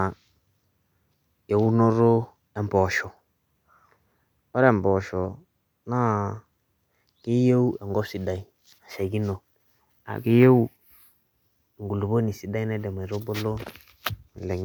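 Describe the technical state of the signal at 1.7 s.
At 1.7 s the speech is inside a drift correction step (1.66 to 2.27 s). Playback slows 6.1% and pitch drops 109 cents, about a semitone, likely from clock-matching software adjusting its buffer. Unlike wow, the shift is abrupt and steady.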